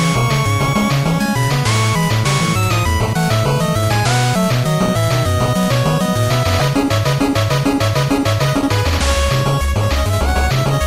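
A blip at 0.72 s, then a much louder burst from 6.59 to 6.64 s. Both are corrupt frames decoded: damaged bits in a couple of compressed frames were played anyway, scattering energy across wrong frequencies.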